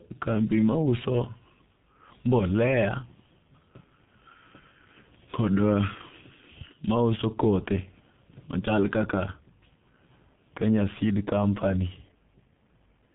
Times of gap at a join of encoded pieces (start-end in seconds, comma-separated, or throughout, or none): none